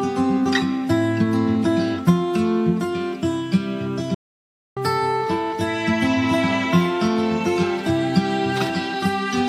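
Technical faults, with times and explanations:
Throughout: timecode bleed. A steady chirping warble sits well beneath the sound, about 35 dB down, flipping between roughly 1 kHz and 2 kHz. That two-tone pattern is the signature of linear timecode, a square-wave code whose biphase encoding alternates between a base frequency and its double, here running at 30 frames per second. It points to an adjacent timecode track or cable coupling into the audio path, through crosstalk on a tape head, a shared multicore or a poorly isolated connector.
4.14 to 4.77 s: playback stall. The sound stops mid-flow and the output drops to silence for about 621 ms before resuming. A gap like this is what a player produces when its buffer empties or its audio thread is held up and it has nothing to send to the output. The likely cause is data arriving too slowly from storage or network, or a scheduling delay on the playback thread.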